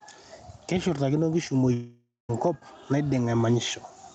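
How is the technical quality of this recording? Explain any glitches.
The recording has two clear faults: level pumping through the whole clip and one long gap in the speech.

The first is gain pumping, present from start to finish. The swing is large, around 15 dB. The likely cause is an input gain set far too high, with a fast limiter clamping down on every peak. Loud and quiet parts sit unnaturally close, so the speech sounds squashed.

The second is a long network dropout, from 1.73 s to 2.30 s. Roughly 0.56 s of audio never arrived. The receiver stretched the last sound to cover the hole, so it turns into a fading tail. For about the final 0.21 s of the gap, almost nothing is heard. Speech then resumes further on, and the missing piece is simply gone. A burst of lost packets on the call link is the likely cause.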